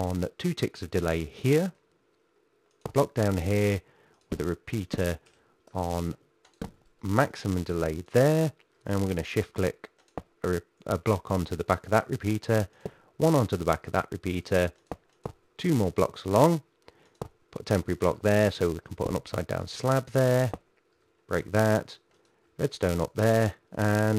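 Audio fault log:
Throughout: filter restarted on every block. The filter drops its stored state at each block boundary and begins from silence, so every block opens with a small transient. These arrive at 345 Hz, which fits a 128-sample block, and form a buzz that rises and falls with the signal's level.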